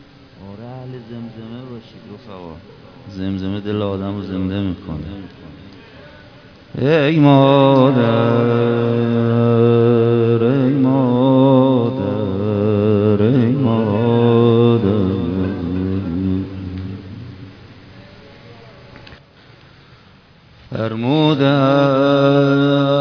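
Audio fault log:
throughout aliasing: unfiltered content above 5.5 kHz folds back as faint, gritty, unrelated tones, and the spectrum runs hard to the band edge, consistent with resampling to 11 kHz.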